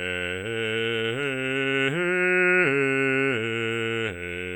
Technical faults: USB whine

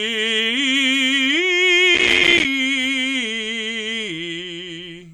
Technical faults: processor overload crackle

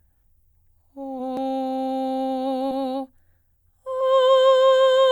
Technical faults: compressed frames skipped; audio missing between chunks

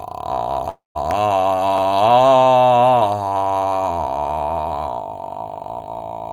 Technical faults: long network dropout

